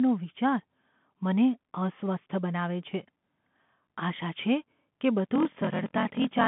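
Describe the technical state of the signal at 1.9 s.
At 1.9 s you're hearing the Bluetooth CVSD headset codec, and it's there the whole way through, not just at that moment. CVSD sends one bit per sample saying up or down with an adapting step, which fits a 64 kbps link. The speech sits in a phone band of roughly 150 Hz to 3.4 kHz, with nothing above 3.8 kHz. The damage is plainly audible: loud bright sounds outrun the step and distort, s sounds go scratchy, and a grainy hiss sits underneath.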